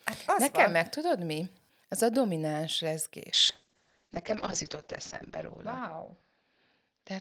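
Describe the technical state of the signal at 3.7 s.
At 3.7 s the speech sounds muffled and watery, with the top end gone above 8 kHz. This is a call bitrate drop starting at 3.35 s, just after "a domináns", and lasting to the end. The encoder was starved of bits, consistent with a fall from around 64 kbps to roughly 7 kbps. It codes coarsely and narrows the band from 20 kHz, bottoming out for about 2 s.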